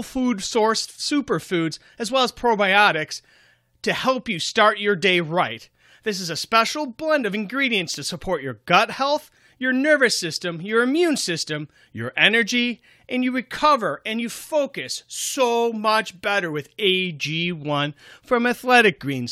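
Speech recording with no technical faults to report.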